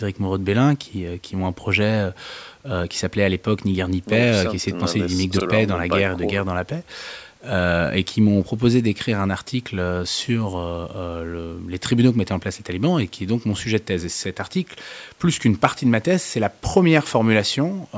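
No faults detected; the speech has the normal band-limiting of call microphone processing, with the lowest bass removed and nothing above 8 kHz.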